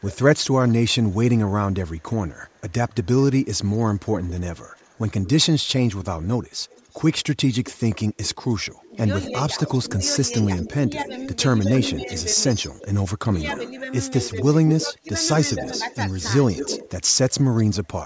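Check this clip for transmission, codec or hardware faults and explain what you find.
Two faults show up, both tied to how the far end handles its loudspeaker.

Echo leak runs through the whole clip, 0.0 to 18.04 s. A faint copy of the speech trails the original by about 220 ms, sitting around 15 dB down. The likely cause is a speakerphone whose echo canceller didn't fully subtract what its mic picked up from the loudspeaker, so the remainder got sent back.

Speech suppressed in double talk appears twice, from 8.89 to 12.08 s and from 13.18 to 15.8 s, while both sides overlap. In the first stretch the level dips by roughly 10 dB. In the second it drops much harder, around 25 dB, close to cutting out. Each spans about half a second in total, in short pieces. The canceller most likely couldn't tell the local talker from the echo and turned everything down together. The band stops at 8 kHz, from the call's mic processing.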